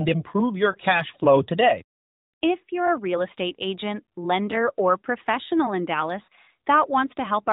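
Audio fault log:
0.72–0.77 s and 6.26–6.28 s, lost AMR speech frames: Each time a single 20 ms frame appears to have failed its checksum after radio errors, so the AMR-NB decoder, whose light coding fits its 12.2 kbps mode, filled the gap by repeating the previous frame's pitch and vocal tract settings at reduced gain. The result is a brief dip or warble, first between "improve your" and "flow today", with the sound returning weak or rough for a moment right after each gap.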